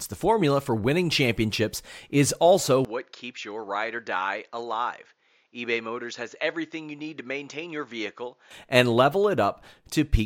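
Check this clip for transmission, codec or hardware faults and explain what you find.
One fault is present. From 2.85 to 8.51 s the speech abruptly turns duller and drops about 10 dB, with nothing above 7.1 kHz and a faint new noise floor roughly 45 dB down. The likely cause is an input switched to a poorer device, whose narrower band and own noise replace the original microphone's without any gap, until the clearer sound returns at 8.51 s.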